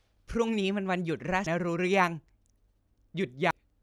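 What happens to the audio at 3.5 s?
At 3.51 s the speech is broken by a brief glitch, heard as a chirp, squawk, click or short hole. It comes from damaged data in a compressed stream. A stretch of the encoded file is corrupt, so the decoder reads garbage as audio or throws those frames away. It then loses its place in the stream and has to hunt for the next valid frame header before normal playback resumes.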